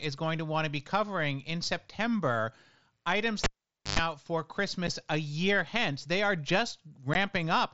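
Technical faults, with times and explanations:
3.44–3.99 s, cable pulled and plugged in: a pop, roughly half a second of near silence with about 110 ms of 50 Hz mains buzz as the tip touches, then another pop.
4.87 s and 7.14 s, unconcealed Bluetooth headset packet loss: abrupt holes of 7.5 ms, just before "a year hence", and 15 ms. The lost headset audio was replaced by silence or an idle pattern rather than patched over.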